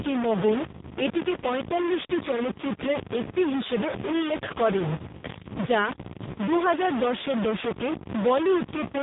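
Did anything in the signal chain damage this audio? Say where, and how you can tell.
Yes. Low bit depth without dither runs through the whole clip, at the sample-format conversion stage. The grit tracks the speech and sits about as loud as the speech itself, and quiet stretches collapse or sputter. This points to roughly 3 bits, likely truncated without dither.

The AMR narrowband mobile codec is also present throughout, in the call path. Nothing reaches above 3.8 kHz, and the speech sounds heavily buzzy and synthetic, built from sparse pulses per frame. That fits one of AMR-NB's low modes, near 5 kbps.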